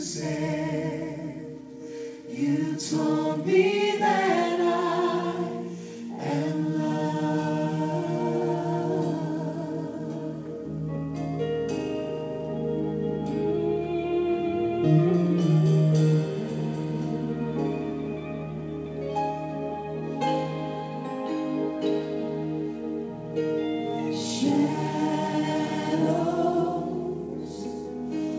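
Nothing goes wrong anywhere in the clip; it simply came through a call connection that holds everything below about 8 kHz with nothing above, which fits a wideband call codec such as G.722 at around 64 kbps.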